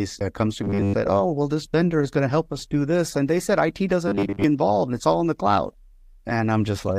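Robotic sound from repeated short buffers appears from 0.64 to 0.95 s and again from 4.08 to 4.44 s. The speech becomes a rigid metallic buzz at 100 Hz, likely from a roughly 10 ms slice being replayed while most of the incoming audio is skipped.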